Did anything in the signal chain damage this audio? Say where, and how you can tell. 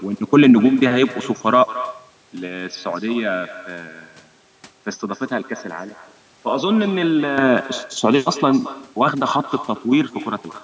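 Yes. At the far end of the call, echo with no canceller: the loudspeaker's output reached that microphone and went back through the network unremoved. The speech is shadowed throughout by a thinner copy about 17 dB down, trailing roughly a fifth of a second behind.

At the capture stage, the input likely switched to a poorer device from 2.13 to 7.38 s. There is no gap at either change, but the band narrows from the 8 kHz ceiling of the call processing. The level drops by around 10 dB, so the speech turns duller and quieter until it clears again.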